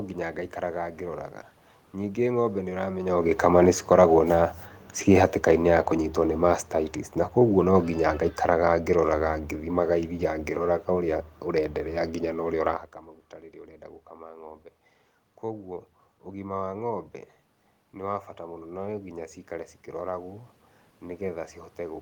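From 2.24 s to 12.75 s you get automatic gain falling. The gain control decided the input was too loud or too noisy and pulled its gain down slowly, about 9 dB over roughly ten seconds. The speech fades, and the room noise behind it sinks right along with it. That shared fade is what gives it away as the gain stage and not the talker, who does shift position around 3 s.

Then there's automatic gain rising, twice. At about 12.5 s the talker moves again and the input drops by about 17 dB. From 14.12 s to 16.55 s the control claws back only about 3 dB, so you hear the speech and background swell together while staying well down. It starts climbing again at 18.39 s and is still creeping up when the clip ends, with the room noise lifting in step.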